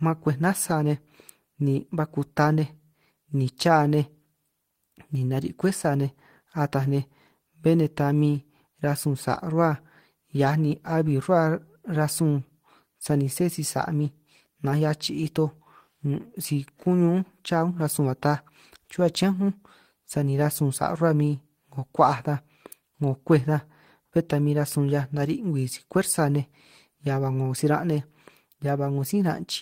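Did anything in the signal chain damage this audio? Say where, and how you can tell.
No, nothing in the signal chain damaged this audio.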